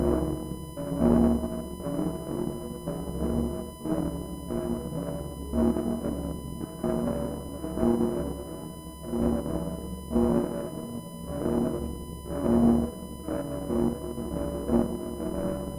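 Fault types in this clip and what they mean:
USB whine: A steady, fixed-pitch whine at 1 kHz runs through the whole clip, sitting roughly 20 dB below the sound. It comes from the USB bus drawing current in 1 ms frames, which leaks into the audio through the power or ground.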